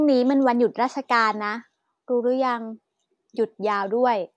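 No technical faults are audible.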